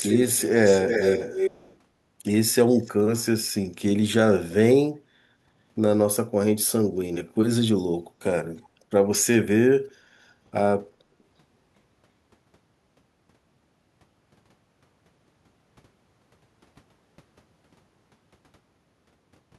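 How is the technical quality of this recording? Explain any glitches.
The recording carries an echo leak near the start, heard three times: 0.0 to 0.43 s, 0.65 to 1.76 s, and 2.79 to 2.92 s. A delayed copy of the speech trails it by about 0.34 s, which most likely means the far end's echo canceller let loudspeaker pickup back into its microphone. In the first two stretches the echo is strong, only a few dB under the speech. In the last it is a faint scrap, far below it.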